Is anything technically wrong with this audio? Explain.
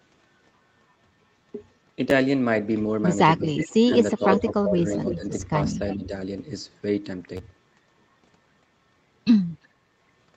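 Yes, there are three kinds of fault.

Repeated buffer at 2.10 s, 5.41 s and 7.37 to 7.39 s: late audio made the device replay its last block of about 10.7 ms, which fits a 512-sample buffer. It plays once extra at the first two and twice at the third, giving a tiny click-like stutter. An echo would instead arrive much later.

Speech suppressed in double talk, from 3.38 to 3.42 s and 3.87 to 6.12 s: the level dips by about 5 dB briefly, then by up to about 15 dB in pieces totalling roughly a second. The likely cause is an echo canceller ducking both talkers at once.

Echo leak at 3.57 to 3.77 s, 4.10 to 4.42 s and 5.11 to 6.07 s: a faint copy of the voice trails it by about 340 ms, roughly 10 to 15 dB down, likely from a loudspeaker whose canceller let echo through. That delay separates it from the immediate repeats of a buffer fault.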